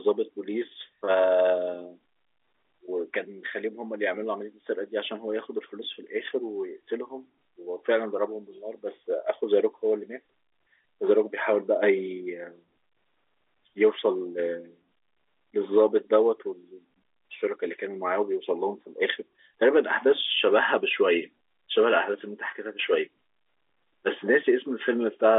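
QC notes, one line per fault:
No faults found; the speech is confined to a normal telephone band of about 300 Hz to 3.6 kHz, as expected of G.711 telephone coding.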